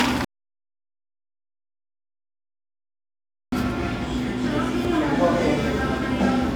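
An everyday sound recording with an audio dropout to silence: the sound cuts off at 0.25 s and returns abruptly at 3.52 s, leaving about 3.28 s of silence with no room tone, most likely from a lost input or link. The waveform shows a flat line, the spectrogram a completely blank band.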